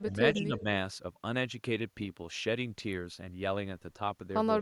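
Speech suppressed in double talk from 0.04 to 0.66 s in this speech clip: the voice dips by about 10 dB, for roughly 0.4 s in total, likely because an echo canceller mistook it for loudspeaker echo while the far side was talking and turned it down.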